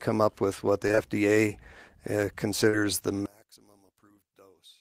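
Short concealed packet loss occurs at 0.87 to 0.99 s, just after "up with what the", as three back-to-back gaps of about 20 ms each. The decoder received nothing for those moments and extended the preceding speech in its place before blending back into the real signal, which leaves a brief smeared wobble across the gap. A second loss at 2.69 to 2.75 s is longer: 40 ms went missing, and the concealment covers it with a stretched, blurred fragment.

From 3.26 s to the end, the speech abruptly drops by about 29 dB and becomes a faint trace of itself. The likely cause is one channel inverted: one stereo channel has reversed polarity, so the centred speech shared by both channels cancels when they are combined to mono. Only the small difference between the two channels remains audible.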